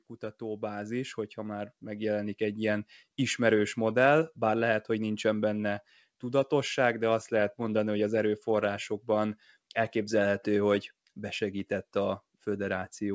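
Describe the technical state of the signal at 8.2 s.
At 8.2 s the speech is intact, with no dropout, glitch or distortion, only the steady coding texture of the call path and its band limit, with nothing above 8 kHz, which fits a wideband codec such as G.722.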